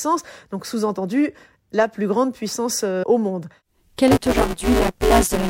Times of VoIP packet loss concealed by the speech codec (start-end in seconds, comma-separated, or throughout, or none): none